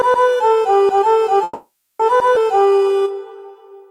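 From 1.43 to 2.01 s the everyday sounds stop moving forward in a call audio freeze. The likely cause is packets held up in transit until the jitter buffer ran dry. The receiver stretches the last sound into a fading buzz for about 560 ms, with roughly 10 ms of true silence. When the audio resumes, nothing is lost, but everything after it now runs about 560 ms late. On a spectrogram this appears as frozen, smeared horizontal bands that fade out. The waveform shows a decaying, repetitive envelope instead of fresh detail.

At 2.35 to 2.38 s there is a skip ahead. A stretch of about a fifth of a second is dropped while later audio was already queued, and the two sides are spliced with only about 10 ms of fill. The listener hears the sound jump abruptly forward. A spectrogram shows a sharp vertical seam where unrelated patterns meet. The waveform shows a sudden change of shape with no gap.

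From 2.55 to 3.83 s a jitter buffer slow-down builds the buffer's reserve back up. Single pitch periods and slices of quieter passages are repeated many times, adding 136 ms. Playback runs at about 90% speed with unchanged pitch, so sounds drag out. On a spectrogram, events appear horizontally stretched while their frequencies stay put. The waveform shows near-identical cycles repeating back to back.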